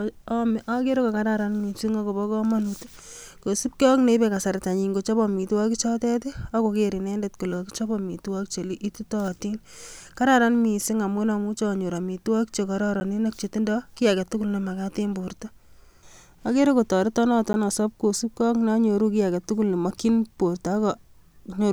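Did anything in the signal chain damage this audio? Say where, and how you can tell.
Yes. There are blocks of digital silence at 13.0 s and 17.53 s, the second just before "asob kosiibge ak neonyooru". Each 10 ms hole drops abruptly to silence and returns unfaded, short enough to be heard as a tick or dip, which points to the driver or buffer stage missing its deadline.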